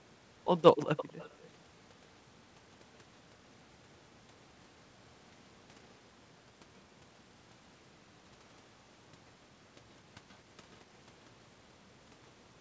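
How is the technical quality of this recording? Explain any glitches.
The speech has echo leak in three places, over audio band-limited to 8 kHz by the call path. From 0.85 to 1.49 s, a distinct copy trails 238 ms behind, roughly 15 dB down. Fainter scraps at 10.29–10.36 s and 10.72–10.77 s lag 133 ms. The likely cause is a far-end loudspeaker whose echo canceller let sound return. Unlike reverb, these are discrete delayed repeats, not a smooth decay.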